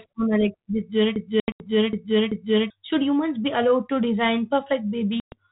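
From 1.16 s to 2.70 s the speech falls into a broken-record loop: a 0.39 s fragment repeats four times back to back, likely because the player or stream stalled and kept resending its last buffer. The speech that belonged in that span is lost.

Inside the loop, from 1.40 s to 1.66 s, there is packet loss on the ADPCM call. About 160 ms drops out across roughly 200 ms, with the longest gap 80 ms, and the gaps are hard-edged silences. Each loss also knocks the decoder's adaptive predictor and step size out of step with the sender's, so the speech comes back slightly distorted before it settles. The same thing happens from 5.20 s to 5.36 s, where about 120 ms of several packets is lost. That pattern fits a 32 kbit/s G.726 link, which also keeps the speech band below 4 kHz.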